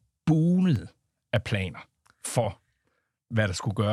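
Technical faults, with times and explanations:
0.61 to 1.66 s, CD scratch ticks: eight short ticks at roughly seven a second, none longer than a couple of milliseconds. A blemish on the disc wipes out more data than error correction can rebuild once per turn, so the player patches or mutes those samples.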